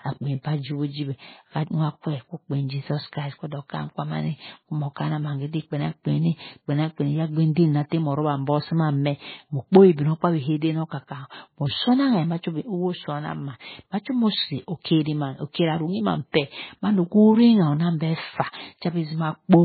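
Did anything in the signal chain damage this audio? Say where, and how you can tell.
Yes, at the codec stage, throughout the speech. Nothing is present above 4.5 kHz, so s sounds lose their hiss and the sound is dull and watery, with a swirling, warbling texture as weak frequency lines drop in and out between frames. The likely cause is heavy MP3 compression, consistent with a very low bitrate around 16 kbps. On a spectrogram this shows as a flat shelf at 4.5 kHz and speckled, patchy energy below it.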